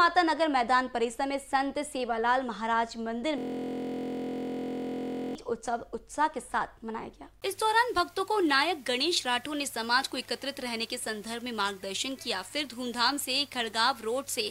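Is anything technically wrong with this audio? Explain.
Yes. A system hang loop runs from 3.38 to 5.35 s. The playback system froze, but the audio hardware kept reading the same ring buffer. One 23.22 ms slice, which fits a 1024-sample buffer, repeats exactly about 85 times. Because the loop is so short, it is heard as a steady, mechanical buzz at 43.1 Hz, the loop rate, instead of a stutter, until normal audio resumes at 5.35 s.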